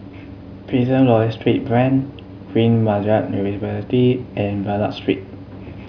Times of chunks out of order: none

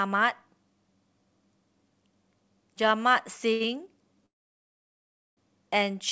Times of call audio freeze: 4.26-5.40

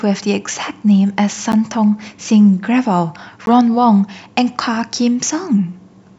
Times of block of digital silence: 1.52, 3.46

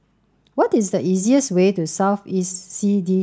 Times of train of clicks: none

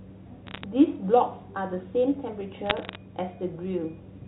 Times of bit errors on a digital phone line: 0.47-0.64, 2.66-2.95

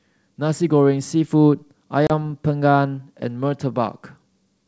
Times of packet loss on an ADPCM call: 2.07-2.11

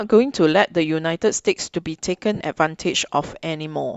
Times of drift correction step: none

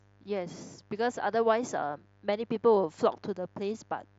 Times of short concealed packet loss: none

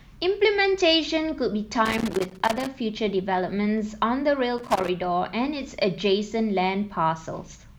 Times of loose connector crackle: 1.85-2.67, 4.58-4.89

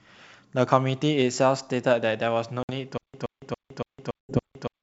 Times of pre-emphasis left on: none

